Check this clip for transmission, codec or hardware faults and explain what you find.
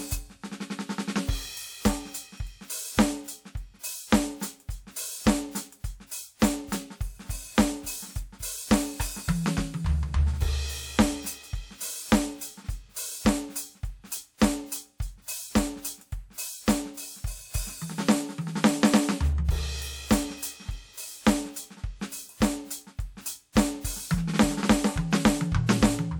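One codec fault turns up in this music clip: pre-echo, from 15.22 to 15.28 s. The transform codec spreads quantisation noise across its whole block, so noise scaled for a loud attack late in that block also fills the quiet stretch just before it. That leaked noise spans about 56 ms and is heard as a brief hiss running ahead of the attack, which itself loses its sharp edge and sounds softened and smeared.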